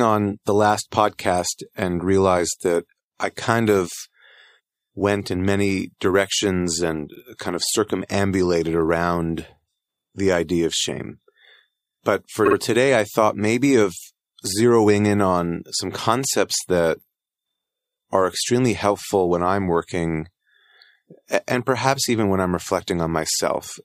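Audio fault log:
throughout: sample clock jitter. A hiss and roughness rides on the speech, growing on loud and bright passages such as sibilants and dropping away in the pauses. The converter's clock wanders by around 2 microseconds, so each sample is taken a little early or late. Where the waveform changes fastest, that timing slip becomes the largest level error, leaving noise roughly 35 dB below the signal that follows the program rather than sitting at a steady floor.
7.15–7.20 s and 12.45–12.55 s: repeated frames. The speech stutters twice, with a short slice played again. At 7.15 s a 52.2 ms block is heard once more, adding 52.2 ms. At 12.45 s the same-sized block plays twice extra, adding 104.5 ms. The block length fits a pair of compressed frames. A run of frames was duplicated in writing or transmission, so the decoder faithfully replays material that has already passed.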